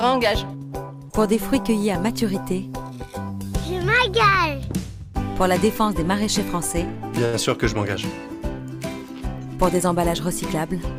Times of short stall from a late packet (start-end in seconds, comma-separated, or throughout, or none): 7.25-7.35